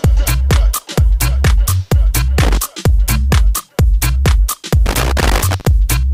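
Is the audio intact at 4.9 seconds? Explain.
No. At 4.9 seconds an irregular burst of crackle and scratching breaks through, running from about 4.86 to 5.65 s. It is loose connector crackle: a worn or dirty contact keeps making and losing connection, chopping the signal and throwing pops from any DC on the line.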